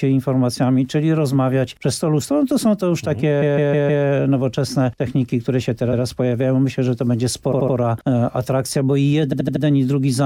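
Runs of compressed frames were written or delivered more than once, so the decoder plays the same slice of audio repeatedly: repeated frames. From 3.41 to 4.04 s a block of about 157 ms loops four extra times. At 5.92 to 6.02 s a 105 ms block plays once more. From 7.51 to 7.75 s a 78 ms block repeats three extra times, and from 9.32 to 9.63 s a 78 ms block repeats four extra times. Each is heard as a stutter, and together they stretch the sound by about 1.3 s.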